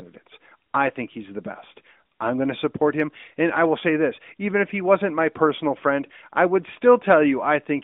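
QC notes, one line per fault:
6.06–6.17 s, AMR bit errors: brief hoarse, scratchy, gargly distortion over band-limited AMR-NB speech, pitch and level held. A few percent of weakly protected bits flipped, misplacing excitation pulses and skewing fine pitch, gain and spectral values. The span fits about five 20 ms frames.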